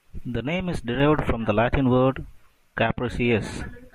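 The gain applied to the signal most likely stepped up between one sample and the next without any ramp, at 1.00 s, just after "name is". This is a sudden gain jump of about 6 dB that holds until the end of the speech clip. The voice and the background noise rise together at that instant, so the floor behind the speech becomes audibly louder at the same moment the speech does, and both stay at that raised level.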